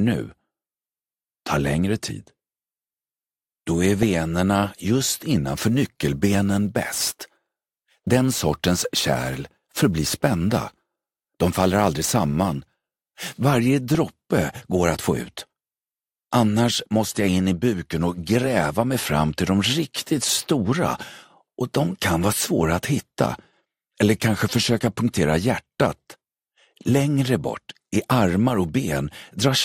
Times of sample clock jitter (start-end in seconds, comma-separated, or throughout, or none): 5.48-13.48